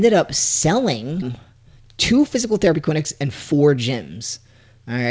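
At 1.22 to 1.24 s there is a skip ahead. Roughly a second of audio never reaches playback. It was lost in transit or dropped when the jitter buffer overflowed, while later audio was already queued. Nothing fills the hole. The sound on either side of the jump is butted together almost directly. The speech lurches forward abruptly, with a missing chunk and no pause to mark it.

From 1.28 s to 4.74 s comes a jitter buffer speed-up. The buffer is holding more audio than its target. The receiver trims it back by cutting out tiny pieces, one or a few pitch periods long, again and again. Altogether about half a second disappears. Playback runs at 114 percent speed, yet the pitch stays put. The speech sounds rushed and clipped. Throughout, the band stops at 8 kHz, which fits a wideband call codec.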